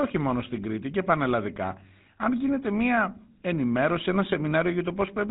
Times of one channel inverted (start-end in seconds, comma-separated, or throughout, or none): none